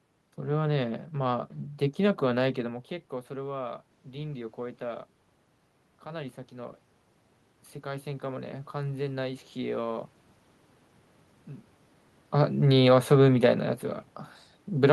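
From 7.82 to 10.1 s, automatic gain rising lifts speech and room noise together by about 4 dB; the waveform envelope and spectrogram noise floor brighten gradually.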